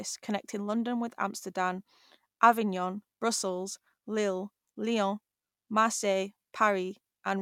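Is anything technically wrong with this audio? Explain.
No, nothing is technically wrong with this audio.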